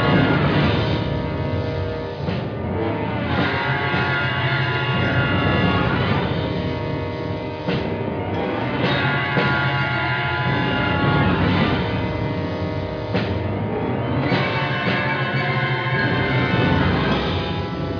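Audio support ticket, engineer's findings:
No faults found in this clip. No dropouts, distortion or timing problems were heard anywhere in it.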